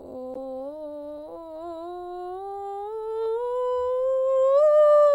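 Damaged data in a compressed stream appears from 0.34 to 0.36 s, early in the music. For roughly 22 ms, the encoded frames reaching the decoder are corrupt, with bytes missing, zeroed or overwritten. The decoder cannot read those frames properly, loses its alignment with the stream, and has to hunt for the next valid frame header before normal playback returns. The result is a short chirp, squawk, click or hole, cutting abruptly into the musical texture.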